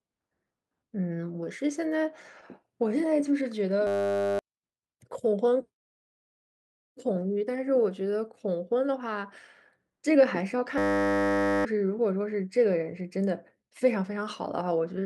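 Clock drift between sender and receiver runs through the whole speech clip: the sender's clock is about two percent slow, so the receiver's buffer keeps draining and needs topping up. Repeated timing corrections follow from 0.28 to 15.01 s, stretching playback to 98% speed with small repeated pieces, adding roughly a third of a second and giving a faintly uneven tempo. A system hang loop appears from 3.87 to 4.39 s. The system freezes while a 10 ms buffer cycles 52 times, producing a steady 100 Hz buzz in place of about half a second of audio. A second system hang loop, from 10.78 to 11.65 s, repeats a 10 ms piece 87 times. The result is the same 100 Hz buzz, replacing roughly a second of audio.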